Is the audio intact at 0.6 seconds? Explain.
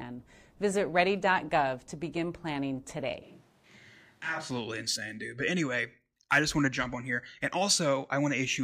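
Yes, the speech at 0.6 seconds plays through intact, with no dropout, click or other fault at that moment.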